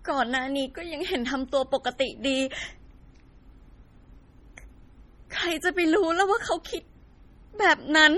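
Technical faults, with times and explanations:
Throughout, MP3 compression: the encoder likely ran short of bits, heavily enough to fit an encode of around 32 kbps, so it discarded weak frequency lines and kept only what its hearing model judged essential. Those lines drop in and out from frame to frame, giving the speech a watery, swirling texture, with chirpy s sounds and smeared onsets. The treble is cut sharply, with nothing above 20.4 kHz.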